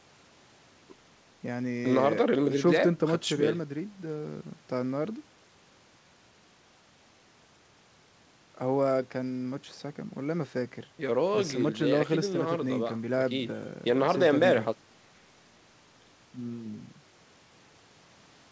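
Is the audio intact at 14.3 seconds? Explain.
Yes, the speech at 14.3 seconds is intact, carried through the WebRTC call path with its band limit at 8 kHz and no fault at that moment.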